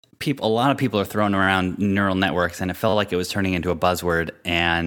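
Playback twice ran short of fresh audio and replayed its last buffer, a repeated buffer fault, after "of people are throwing" at 1.43–1.47 s and after "networks and it felt" at 2.89–2.93 s. Each time a 10.7 ms piece, which fits a 512-sample buffer, plays four extra times with hard joins, giving a brief buzzy stutter.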